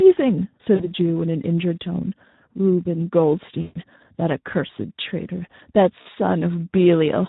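Speex codec damage runs through the whole speech clip, with a hoarse, noisy edge that points to a low setting around 11 kbps, where the excitation gets very few bits. Then come three spots of VoIP packet loss concealed by the speech codec, at 0.75–0.89 s, 3.61–3.78 s and 6.01–6.07 s. The decoder stretches its last frame into a sound that fades out, and the middle one is longest, suggesting roughly 140 ms of missing audio.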